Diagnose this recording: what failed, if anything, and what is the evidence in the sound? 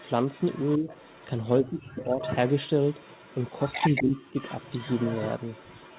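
Echo leak in the call-processing stage: a delayed copy of the speech trails it at 0.0–0.11, 0.27–1.27, 2.21–2.7, 2.87–4.04 and 4.22 s onward, lagging 256 ms, then 225 ms, at roughly 10–25 dB down. It is likely residue from an incomplete echo canceller. Spectrograms show harmonics repeated, shifted right.

Speech suppressed in double talk, also in call processing: at 0.78–0.89, 1.59–2.22 and 3.9–4.39 s the talker's level sags by about 15, 25 and 20 dB while the far side speaks. The likely cause is the canceller ducking both voices. The waveform envelope shows abrupt notches there.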